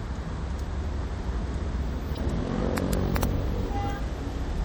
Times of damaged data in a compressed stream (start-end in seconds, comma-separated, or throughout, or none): 2.13-2.18, 3.99